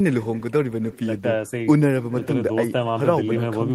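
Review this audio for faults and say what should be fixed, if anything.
Throughout the speech, each phrase is trailed roughly a third of a second later by a faint, thin copy about 22 dB down: echo with no canceller. The far end's loudspeaker output re-enters its microphone and returns uncancelled. Enabling acoustic echo cancellation at the far end, or having that listener use a headset, would prevent it.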